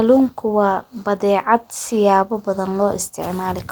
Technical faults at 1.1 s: lost packet rebuilt from error correction

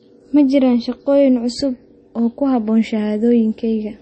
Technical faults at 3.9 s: MP3 compression

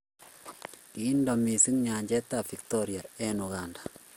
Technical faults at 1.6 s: generation loss

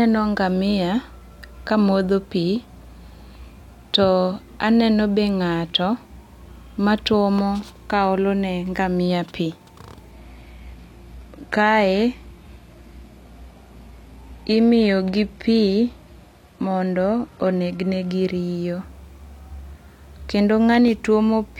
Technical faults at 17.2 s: adaptive stream at a lower bitrate

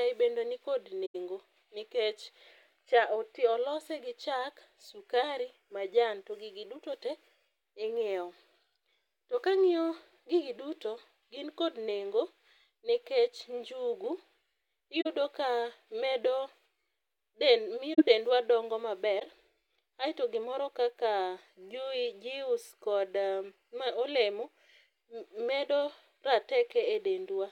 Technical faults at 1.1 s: corrupt frame concealed

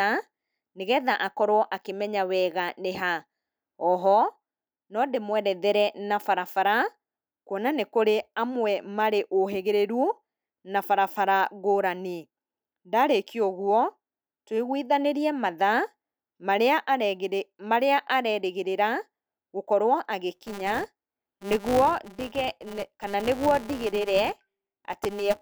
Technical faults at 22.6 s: filter restarted on every block

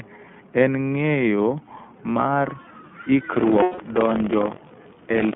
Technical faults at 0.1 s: iLBC codec

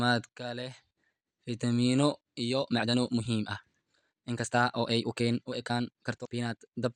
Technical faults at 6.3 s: time-stretched section; damaged data in a compressed stream

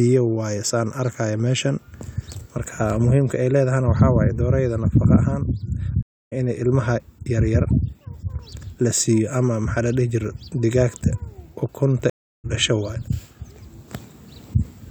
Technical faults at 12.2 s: stream reconnect

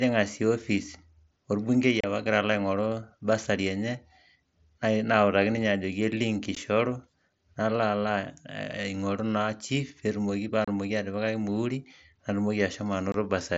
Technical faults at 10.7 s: unconcealed Bluetooth headset packet loss

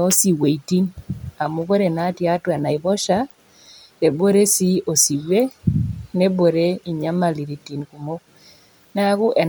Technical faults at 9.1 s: none

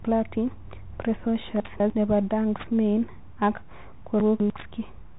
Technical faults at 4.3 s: Bluetooth CVSD headset codec; chunks out of order

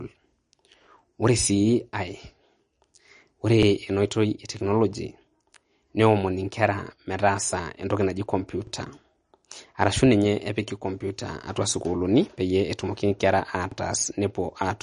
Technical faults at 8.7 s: MP3 compression; overlapping chunks

